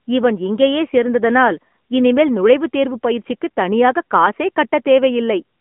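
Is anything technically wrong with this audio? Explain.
Yes. Throughout the speech there is AMR narrowband mobile codec damage. Nothing above about 3.6 kHz survives, and the low end thins below about 200 Hz, giving the boxed-in 200 Hz to 3.4 kHz band of a phone line. The codec rebuilds speech from a vocal-tract model excited by a handful of pulses per short subframe, so detail is resynthesised rather than kept. The result is a plainly audible buzzy, synthetic edge, consistent with a mid-rate mode around 10.2 kbps.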